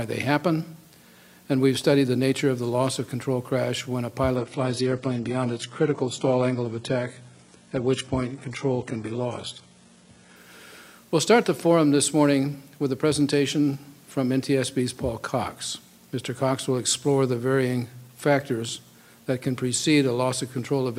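From 4.36 to 10.36 s the audio switches abruptly to a stream at a lower bitrate, the kind of fallback an adaptive player makes when the connection slows. For those six seconds nothing is heard above about 11.1 kHz, and the top end turns thin, which points to a drop from roughly 96 kbit/s AAC to a 12 kbit/s HE-AAC rendition. There is no gap at either switch, which sets it apart from a dropout or a rebuffering stall.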